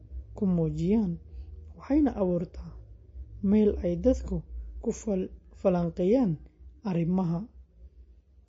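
Throughout the speech, plainly audible MP3 compression damage gives a dull, watery sound, likely from a low-bitrate encode near 32 kbps. Nothing survives above 7.6 kHz, and weak detail flickers frame to frame. A spectrogram shows a flat ceiling at 7.6 kHz with patchy gaps below.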